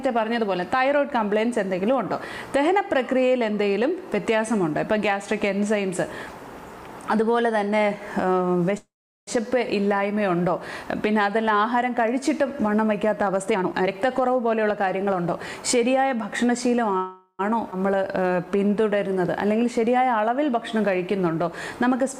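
The audio has four kinds of network fault. A call audio freeze occurs at 8.77 to 9.29 s and again at 16.97 to 17.41 s. Both were likely caused by packets held up on the way, which left the jitter buffer empty. The first pause lasts about 0.5 s and is mostly silent. The second lasts about 0.41 s and stays filled almost to the end. Playback then resumes where it stopped, with nothing lost. A jitter buffer speed-up runs from 13.46 to 15.38 s. Short pitch periods are cut repeatedly, so the audio plays at 126 percent speed without a pitch change and roughly half a second is removed to shed excess delay. A skip ahead follows at 17.71 to 17.74 s. About 100 ms of audio is dropped, and the two sides are joined almost directly. A jitter buffer slow-down runs from 17.92 to 18.96 s. Pitch periods are repeated to rebuild the buffer reserve, adding 120 ms, so the audio drags at 89 percent speed with unchanged pitch.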